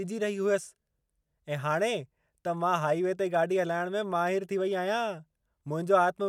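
Nothing in the recording stood out as a technical problem on listening.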